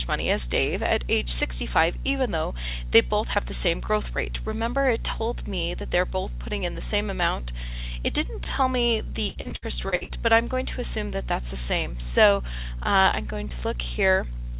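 From 9.29 to 10.12 s there is repeated packet loss with robotic sound. Short holes, the longest 61 ms, are each filled by stretching the preceding audio. About 40 percent of the stretch is concealed, so the band-limited sound turns choppy.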